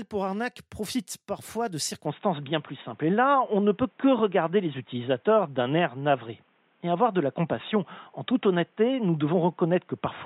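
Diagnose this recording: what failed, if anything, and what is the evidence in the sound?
From 2.05 s the sound goes dull, nothing above 3.8 kHz, level drops or jumps about 5 dB, no gap: likely input switched to a poorer, narrower-band device.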